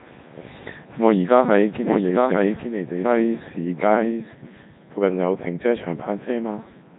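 Codec 2 vocoder damage runs through the whole clip. The speech is rebuilt from pitch, voicing, energy and a coarse spectral envelope rather than the original waveform, so it sounds robotic and buzzy, with nothing above 3.8 kHz, consistent with Codec 2's 3.2 kbit/s mode.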